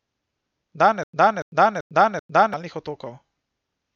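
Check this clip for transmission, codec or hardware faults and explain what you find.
One transmission fault is audible. Stutter with silent gaps, 1.04 to 2.54 s: a 286 ms burst returns four times, separated by 100 ms of digital silence, likely a stalled stream retrying. Unlike simple dropouts, the same fragment repeats.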